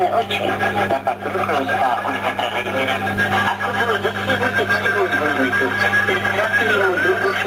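Gain pumping runs through the whole clip, with the level swinging by roughly 10 dB, so loud and soft passages sit unnaturally close together and everything feels squashed. The likely cause is gain set far too high, with a fast limiter or compressor clamping down on every peak.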